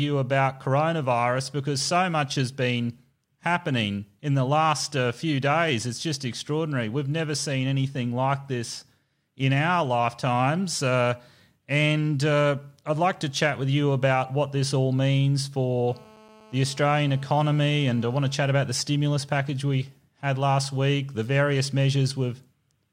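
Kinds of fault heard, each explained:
GSM phone buzz: a nearby 2G phone's radio bursts get rectified, giving a steady, raspy 217 Hz buzz about 26 dB under the sound, 15.88 to 18.33 s.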